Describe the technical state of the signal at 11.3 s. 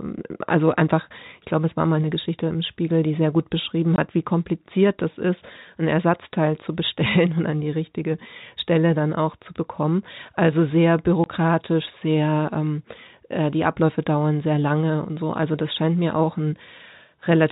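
Packet loss filled with silence sits just before the moment asked, from 11.24 to 11.26 s. A single 20 ms block of the speech never reached the receiver, which played a stretch of silence of exactly that length in its place. The result is a brief hole in the speech with abrupt edges at both ends, as the sound cuts out and snaps back. The narrow, telephone-band character of the G.711 coding carries on across the gap.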